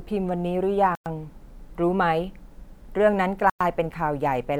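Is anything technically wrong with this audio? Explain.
Yes. Two dropouts, at 0.95 s and 3.50 s, are likely a Bluetooth stall: delayed packets emptied the receiver's buffer, so the speech cuts to silence for about 107 ms each time before resuming.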